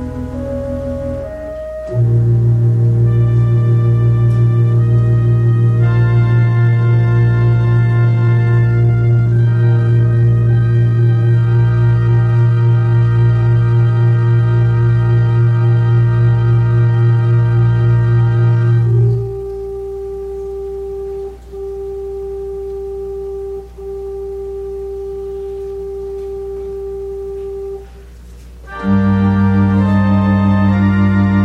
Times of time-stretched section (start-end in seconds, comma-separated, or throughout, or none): 6.29-19.81